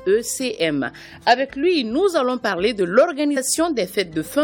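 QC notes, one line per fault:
3.36 s, damaged data in a compressed stream: a brief glitch lasting under 20 ms cuts across the sound. Corrupted bytes in the encoded stream leave the decoder unable to read the affected frame properly, so it either outputs garbled values or discards that frame and loses sync. It then has to hunt for the next valid frame header before decoding can resume, and that short stretch of misread or missing output is what produces the sudden glitch.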